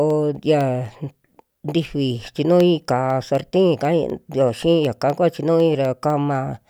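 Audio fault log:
0.10 to 6.60 s, periodic USB or driver dropouts: Every 0.25 s, a tiny fraction of a millisecond of the speech drops to silence, about thirty times. Something likely stalls the audio driver on a fixed cycle. Each gap cuts the waveform, giving a regular tick under the speech.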